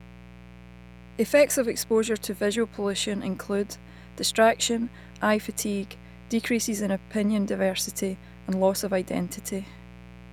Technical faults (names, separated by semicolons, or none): mains buzz